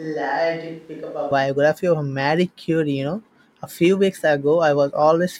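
From the first moment until 1.31 s, the speech sounds roomy and hollow, thin in the bass, around 5 dB quieter than what follows, with room noise sitting higher beneath it, about 35 dB below the speech. At 1.31 s the sound snaps abruptly to a close, full, drier pickup. This is a switch to a distant microphone, likely because the close microphone's feed was missing for that opening stretch and a farther source, such as a camera microphone, carried the audio instead.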